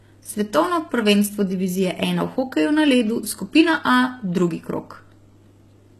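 From start to finish the speech has a synthetic, papery top end, and the s sounds come out gritty and lisping, with a metallic sheen on sibilants. This is likely HE-AAC compression at a very low bitrate, around 16 kbps. The upper band is rebuilt by copying lower harmonics upward, so its detail no longer matches the voice beneath it. On a spectrogram the treble looks blocky and repeated, with nothing above 12.3 kHz.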